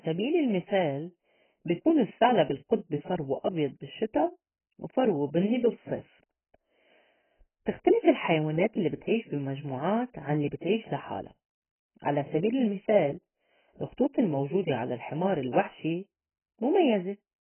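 From start to finish the speech sounds dull and smeared, with nothing above about 3.1 kHz and a warbly, fizzy edge on sibilants. That's likely heavy AAC compression, AAC-LC starved at something like 12 kbps, dropping the top end and leaving spectral holes.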